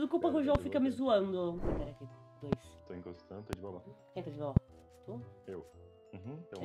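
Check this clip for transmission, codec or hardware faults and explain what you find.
Two kinds of fault show up: four loud pops and one drift correction step.

Sharp, single pops strike at 0.55, 2.53, 3.53 and 4.57 s, each lasting about 25 ms and peaking roughly 20 dB above the surrounding sound, with the last noticeably hotter. The audio carries on underneath each one. These loud pops likely come from a sudden voltage step or pulse, such as static, a switch or a driver glitch, added to the signal and shaped by the circuitry downstream into a brief thump.

From 3.73 to 4.24 s the audio abruptly plays about 6.5% fast, lifting the pitch by roughly 109 cents, just over a semitone, before snapping back. This drift correction step is likely software that reconciles two mismatched clocks changing the playback rate in one jump to drain or refill its buffer, so speed and pitch rise together for half a second.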